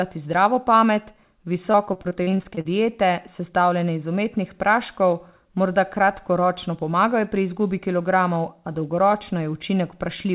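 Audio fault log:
1.72–2.67 s, repeated packet loss (robotic sound): for just under a second the speech breaks into about a dozen short holes, the longest around 41 ms, with roughly a quarter of the span patched by stretching the preceding sound forward. Holes arriving this close together leave the concealment repeating stale fragments back to back, which gives the choppy, robotic quality, all inside the narrowband call path that passes nothing above 4 kHz, which fits G.711-style coding.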